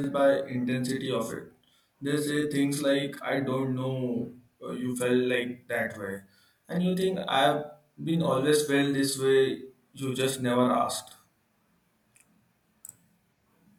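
Channel delay (doubling) runs from the first moment to the last. One channel reaches the mix 40 ms behind the other, and when the two are summed to mono the late copy does not merge with the original. At 40 ms the gap is too long to fuse, so every syllable of the speech is followed by an equally loud repeat, heard as a tight slap or a doubled, stuttering edge on consonant onsets.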